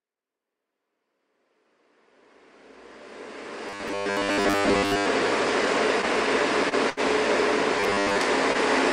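A recording of everyday sounds, fading in smoothly from the start until about 4.34 s, with two kinds of fault. Between 3.68 and 5.06 s, and again from 7.80 to 8.18 s, it becomes a rigid 100 Hz metallic buzz: robotic sound from repeated short buffers, likely from 10 ms chunks being looped while most of the real audio is skipped. Two short stalls from a late packet, at 6.69 to 6.75 s and 6.90 to 7.00 s, briefly hold the sound for 28 ms and 73 ms. Unlike the robotic sections, these are isolated holds with no sustained buzz, and nothing is lost afterward.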